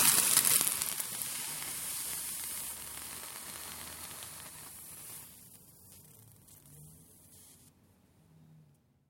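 From 0.19 s to 8.94 s, periodic USB or driver dropouts occur every 0.25 s, around forty in all. Something blocks the audio path at that fixed interval, and each time a tiny fraction of a millisecond is replaced by silence, heard as a steady ticking wherever signal is present.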